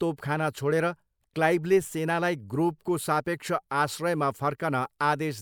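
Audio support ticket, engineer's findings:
Nothing stood out on listening to the speech recording, so there are no findings to log against this ticket.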